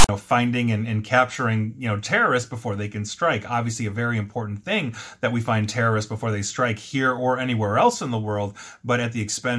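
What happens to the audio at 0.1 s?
File tags played as audio, from 0.0 to 0.09 s, end just before 0.1 s: a block of text metadata was decoded as samples, producing a hard-edged, loud, lopsided rasp, followed by a brief silence where the tag's zero padding was read.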